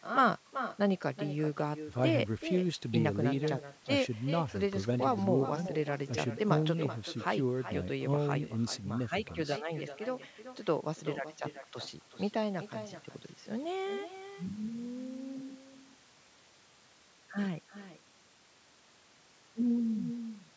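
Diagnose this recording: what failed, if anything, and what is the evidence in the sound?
Echo with no canceller throughout: every phrase returns about 0.4 s later, about 10 dB quieter. On a spectrogram, each burst shows a fainter delayed duplicate, because the far end's loudspeaker feeds its microphone.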